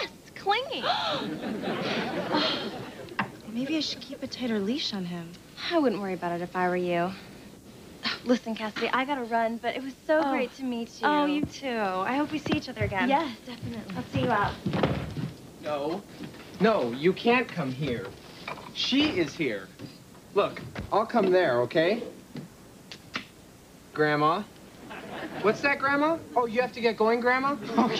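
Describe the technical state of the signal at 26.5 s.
At 26.5 s the signal is intact, with no technical fault present at that moment.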